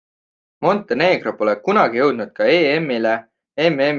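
Nothing in the recording stood out as a technical fault on listening.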